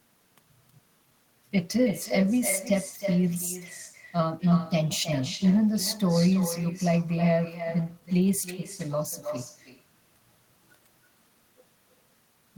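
From start to finish, the speech carries an echo with no canceller. The far end is playing the call through a loudspeaker. Its microphone picks that sound up and sends it straight back. Nothing in the path removes it. So each phrase returns after the network round trip, roughly a third of a second later. The copy sits about 12 dB below the direct speech. It sounds thinner, a quieter shadow trailing every word.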